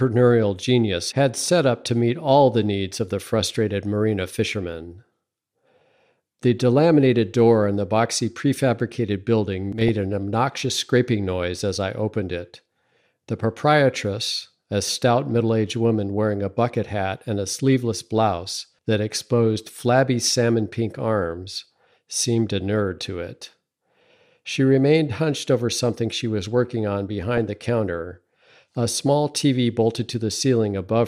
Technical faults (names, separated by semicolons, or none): DAB burbling